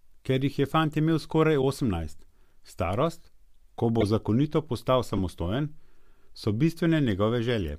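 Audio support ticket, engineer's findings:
Short chirp/noise blips in speech: 1.62–1.64 s after "je fant imel skoraj", 4.01–4.07 s before "zakonito postal", and 5.09–5.19 s after "zakonito postal". Peaks around -20 to -15 dBFS. Corrupt frame decoded. Bit errors in a few compressed frames misread gains and codes, so the decoder put energy in the wrong bands.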